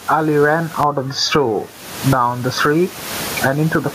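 Gain pumping runs through the whole recording, most likely because the input gain is set far too high and a fast limiter or compressor clamps it down whenever the speech gets loud, then lets it back up in the pauses. The level swings by roughly 30 dB. The room noise sits about 32 dB below the speech, and the speech sounds squashed and flat in dynamics.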